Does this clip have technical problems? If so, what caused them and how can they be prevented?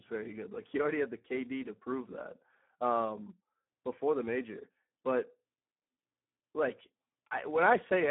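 Yes. Speex codec damage runs through the whole clip. Starved of bits for the excitation, the CELP coder leaves the speech hoarse and noisy, consistent with a setting near 8 kbps, squeezed into a 150 to 3400 Hz band with nothing above 3.8 kHz. Prevent it by sending at a higher Speex quality setting or switching to a modern wideband codec such as Opus.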